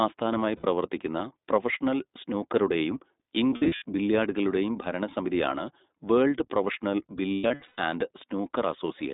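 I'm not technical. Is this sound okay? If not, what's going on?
No. The whole recording sounds thin, like a phone call, and the voice has a slightly rough, synthetic edge. That comes from the iLBC codec, a compression method built for internet phone calls. It keeps only a narrow slice of the sound, roughly 200 Hz to 3.7 kHz, so the low warmth and the bright top end are missing. It also packs the speech into 20 ms chunks, and at this level of squeezing you can plainly hear the damage.

In three places the voice briefly smears into a held, buzzy or breathy tone before snapping back. These are lost iLBC frames: some of those 20 ms chunks never arrived, so the player filled each gap by repeating the last bit of voice with some noise mixed in. The first, at 0.56 to 0.66 s, loses 80 ms of sound. The second, at 3.50 to 3.84 s, comes right after "പ്രൊഫഷണൽ സ്നൂക്കറുടെയും" and just before "ബില്ല്യാർഡുകളുടെയും ഭരണസമിതിയാണ് വേൾഡ് പ്രൊഫഷണൽ". 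About 200 ms of sound is lost there in short pieces, the longest around 70 ms. The third, at 7.36 to 7.80 s, follows "ബില്ല്യാർഡുകളുടെയും ഭരണസമിതിയാണ് വേൾഡ് പ്രൊഫഷണൽ", with 320 ms lost and the longest piece about a tenth of a second. Because each chunk stands on its own, the voice recovers almost at once after each gap.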